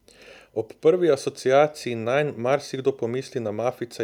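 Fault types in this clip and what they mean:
No technical faults can be heard anywhere in this speech recording. There is nothing here to list.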